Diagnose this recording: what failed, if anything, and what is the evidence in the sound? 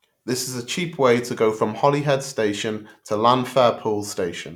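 Nothing failed: at no stage from capture to playback is there anything in the speech that points to a fault.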